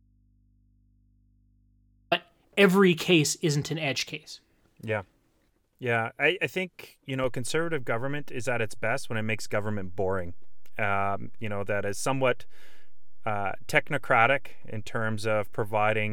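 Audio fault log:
0.00 to 2.12 s, audio dropout to a faint residue: the speech is already missing when the clip opens and returns abruptly at 2.12 s. The gap holds only mains hum, around 35 dB below the speech, likely from a live but disconnected input.
7.24 s, DC step: the waveform's zero line jumps to a new offset and stays there through the end of the clip. The sudden shift is heard as a single low thump, while the speech carries on unchanged over the displaced baseline.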